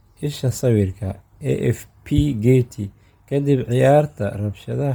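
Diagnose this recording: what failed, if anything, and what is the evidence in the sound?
The codec stage failed. Throughout the speech a heavy breathy, grainy haze coats the upper spectrum, yet content still reaches about 20.1 kHz. That noise-filled top, rather than a clean band cut, points to Bluetooth LC3 compression, likely at about 32 kbps with 10 ms frames.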